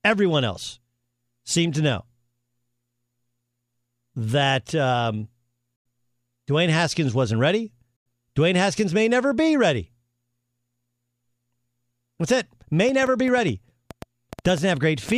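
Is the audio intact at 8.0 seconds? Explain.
No. From 7.96 to 8.06 s the speech drops out for about 93 ms and then resumes further on, as if it had kept playing. This is likely a Bluetooth dropout, where packets arrived too late for the headphones and were discarded, leaving a short silence.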